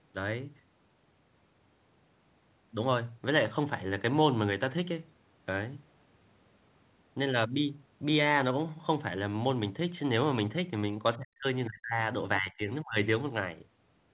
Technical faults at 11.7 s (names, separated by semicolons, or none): speech suppressed in double talk